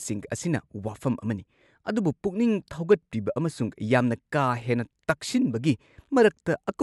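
Nothing stood out as a technical problem on listening to this speech recording.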